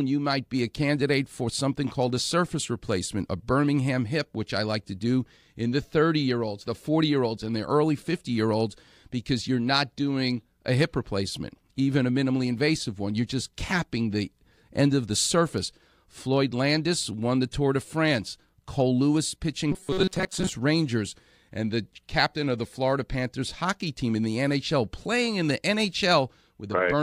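From 19.72 to 20.49 s the speech turns robotic. A fixed metallic buzz near 188 Hz sits over it, following the original only roughly. Most of the audio there is missing. The likely cause is repeated short buffers, each about 5.3 ms long, covering for late-arriving audio.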